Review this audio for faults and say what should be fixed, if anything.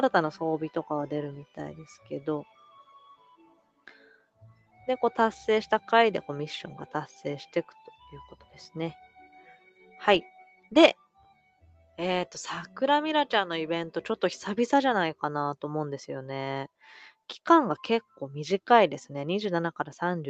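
A noise suppressor applied to music or sounds stays active across the whole clip. A suppressor tuned for speech treats sustained, steady content and decaying tails as background noise and pulls them down. Transients mostly pass at full level. The gain therefore swings by something like 10 dB as the material alternates between attacks and held sound, giving an audible pumping and thinning rather than a stable level. The top end stops at 8 kHz, as expected for this call path.

Sound cut by the noise suppressor shows up as distinct dips at 1.81–2.12 s (about 12 dB), 2.44–4.81 s (about 18 dB, most of that span affected), 7.47–7.88 s (about 8 dB), 8.33–8.56 s (about 8 dB), 9.07–9.96 s (about 10 dB), 10.38–10.72 s (about 13 dB) and 10.94–11.98 s (about 18 dB, nearly a full second affected). In each case sustained or fading sound sank below the rest or its decay was shortened.

To prevent this, disable noise suppression, or switch the call to a music mode that bypasses it, whenever non-speech audio is being sent.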